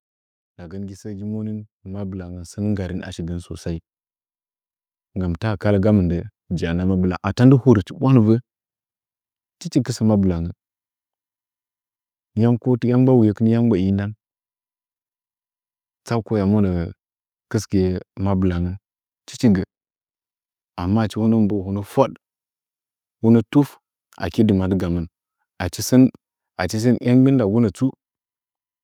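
A speech recording with automatic gain rising from 1.02 s to 6.79 s. The gain control judged the input too quiet and raised its level by about 15 dB over nearly six seconds, so the voice and the background noise swell up together rather than the speech alone getting louder. On a waveform the envelope widens steadily across that span. On a spectrogram the whole picture brightens, noise floor included, at every frequency.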